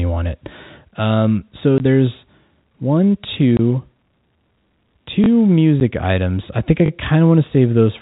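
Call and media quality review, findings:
Packet loss filled with silence: short hard-edged dropouts at 1.78–1.80 s, 3.57–3.59 s, and 5.80 s just before "items I think I". The gaps are 20, 20 and 10 ms, which fits 10 ms packets lost in transit and replaced by silence at the receiver.

Repeated buffer: brief stutters with hard joins at 3.34–3.36 s after "so there's one" (one extra play), 5.24–5.28 s, and 6.86–6.90 s after "items I think I" (two extra plays each). This fits a 20 ms playout buffer replayed on underrun. No audio is skipped. The G.711 A-law path at 64 kbps is working normally, with at most faint coding noise.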